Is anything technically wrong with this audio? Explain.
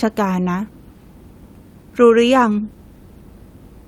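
Yes. Jitter buffer speed-up, 1.83 to 3.3 s: the receiver trims repeated pitch-period slices from an overfull buffer, shedding roughly 70 ms, so speech runs about 5% faster at unchanged pitch, slightly hurried.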